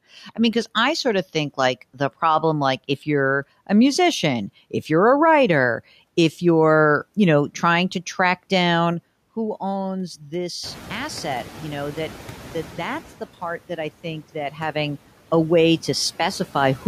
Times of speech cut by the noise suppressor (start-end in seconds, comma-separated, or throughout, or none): 0.24-0.38